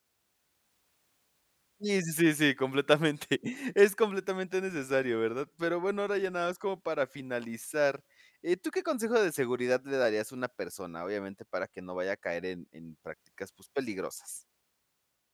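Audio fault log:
No fault is logged for this speech clip.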